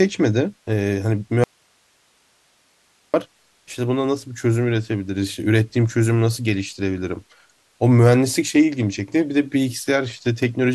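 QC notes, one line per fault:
1.44–3.14 s, audio dropout to a faint residue: speech cuts out abruptly for 1.7 s, leaving only hiss roughly 40 dB down, likely an upstream break with the later path still live. The waveform shows a sharp-edged near-flat block, and the spectrogram shows faint broadband noise without harmonics.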